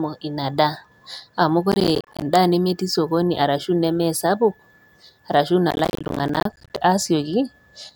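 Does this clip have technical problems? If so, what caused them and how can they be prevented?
Yes: processor overload crackle at 1.72–2.22 s, just before "nemetii sokoni arashu", and at 5.71–6.77 s. Dense runs of missed buffers leave silent gaps of roughly 10 ms each, which is what sets it apart from a single dropout. Prevent it by lightening the processing load or enlarging the buffer.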